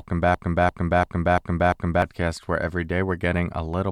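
Speech clip with a broken-record loop from 0.34 s to 2.02 s. A 344 ms fragment plays five times back to back, exactly repeated. Normal speech resumes at "where every". The audio meant for that span is gone. The likely cause is a player or stream stall.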